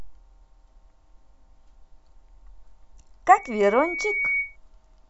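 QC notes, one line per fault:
3.32–4.57 s, loudspeaker feedback squeal. A pure tone near 2.2 kHz swells out of the speech over about a second. It reaches roughly the level of the speech. The microphone is picking up its own loudspeaker, and at that pitch the loop gain exceeds one, so the tone keeps reinforcing itself.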